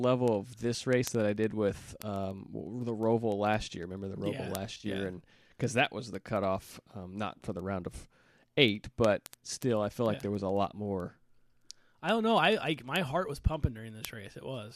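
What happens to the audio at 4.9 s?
Just before 4.9 s, from 4.75 to 4.86 s, the sound turns briefly smeared and noisy. This is AAC frame loss with concealment: about 60 ms of frames dropped in scattered runs, the longest around 30 ms, and the decoder filled each gap from the last good spectrum.

Through that moment, as across the whole clip from 0.13 to 14.70 s, sharp word clock ticks recur roughly every 70 ms. An unlocked receiver clock drifting by roughly 300 ppm drops or repeats a single sample each time the clocks slip.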